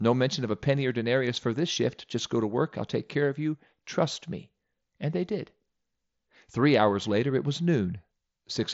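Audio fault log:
No faults are present in this speech clip. The Bluetooth mSBC headset codec is working normally, passing nothing above about 7.7 kHz and adding only a light grain.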